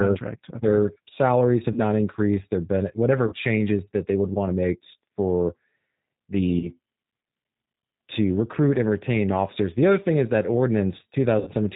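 Throughout, the speech carries the G.729 codec's sound: slightly rough and synthetic, with the codec damage plainly audible. The encoder keeps only a vocal tract filter, a pitch predictor and a few pulses per frame, so fine detail is lost. On a spectrogram, nothing shows above 4 kHz, and the harmonics look smeared and grainy rather than clean. This fits an 8 kbit/s G.729A stream.

At 1.72 s, just after "their salaries", VoIP packet loss concealed by the speech codec begins. The gap runs to 1.79 s and points to about 40 ms of lost audio. Similar gaps follow at 3.27 to 3.35 s, just before "that they would want" (about 50 ms), and at 6.59 to 6.71 s (about 30 ms). The longest comes at 11.39 to 11.51 s, about 80 ms. In each, the decoder extrapolates from the last pitch and filter with falling gain, so the sound fades. Because each frame builds on the previous one, the sound stays weak for a while after packets return.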